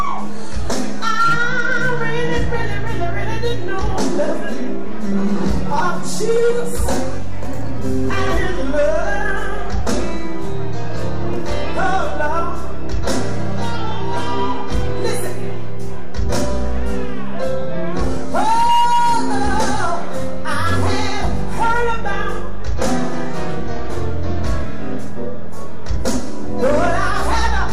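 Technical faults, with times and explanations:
Throughout: DC offset. The waveform sits shifted off zero by a constant of about -14 dBFS, silently eating headroom and leaving steady energy at 0 Hz.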